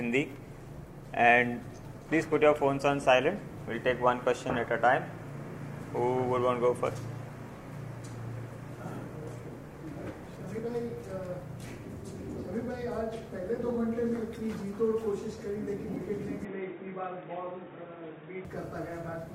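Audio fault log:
16.45–18.45 s, input switched to a poorer device (likely cause): the sound abruptly turns dull and boxy with nothing above 3.8 kHz, no gap at the switch, and a fresh, faint noise floor. On a spectrogram the upper band vanishes at a flat ceiling; the waveform level barely changes.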